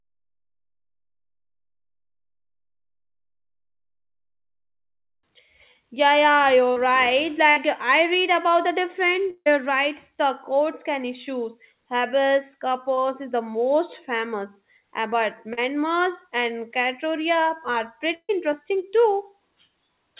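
Around 6.72 s there's the first short concealed packet loss: about 40 ms never arrived, and the receiver stretched the previous sound over the hole, leaving a quick smear. At 7.50 s, just before "I read about the", a burst of packet loss follows. About 60 ms goes missing, filled by the previous sound fading out before the sound picks up further on.

Between "I read about the" and "rights the courts can", at 9.30 to 9.48 s, the sound continues and fades, then drops to silence for about 40 ms. That's likely a long network dropout, with roughly 160 ms never played.

More short concealed losses land at 12.94 s and at 15.53 s, right after "most famous uh but", each a tiny wobble over about 40 ms. The last burst, at 18.15 to 18.31 s, is longer. About 140 ms is lost, with the previous sound fading out and about 50 ms of silence. Throughout, nothing sits above 4 kHz, which fits a G.711 A-law call path.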